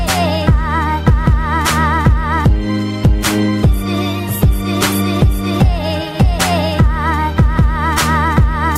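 No technical faults can be heard anywhere in the clip. Nothing in the sound calls for a time mark or further comment.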